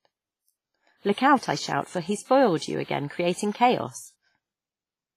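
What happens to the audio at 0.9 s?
At 0.9 s the speech carries the same compression artefacts heard across the whole clip, with nothing at all above 15.5 kHz. This is most likely low-bitrate audio saved at a high bitrate: a heavily compressed first encoding stripped detail, and a later high-rate MP3 pass preserved that damage. What sets it apart from a plain low-bitrate MP3 is that the file's generous rate adds no clarity, while the artefacts sound baked in from the earlier, cruder encoding.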